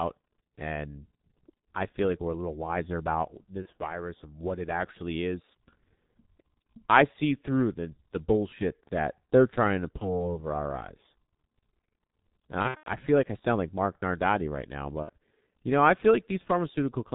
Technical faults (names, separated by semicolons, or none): G.723.1 codec; VoIP packet loss concealed by the speech codec